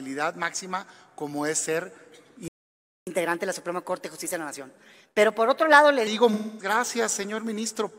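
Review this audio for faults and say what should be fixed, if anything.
Playback stall from 2.48 to 3.07 s: the output drops to silence for about 0.59 s in mid-flow, then the sound resumes. A gap of this kind is most likely the player running out of buffered data or its audio thread being blocked, so nothing reached the output until it recovered. To prevent it, keep a larger playback buffer and run audio output on a high-priority thread that never waits on network or disk I/O.

Catch-up at higher speed from 3.07 to 6.07 s: right after the stall, the audio runs at 1.15 times normal speed for three seconds, and pitch rises by roughly two semitones. The player is resampling its backlog to recover the time lost in the gap, which shifts pitch along with tempo. To prevent it, recover from a stall with a pitch-preserving time-stretch at a gentler rate, or skip the backlog where latency allows.

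AAC frame loss with concealment from 6.33 to 6.74 s: a stretch of about 256 ms turns smeared and noisy, with a phasey quality, instead of carrying clean content. The length fits roughly six consecutive lost AAC frames. The decoder filled the gap by extrapolating from the last good spectrum with randomised signs and interpolated energy, which sounds plausible but is not the real signal. To prevent it, add forward error correction or retransmission on the transport so whole frames are not dropped.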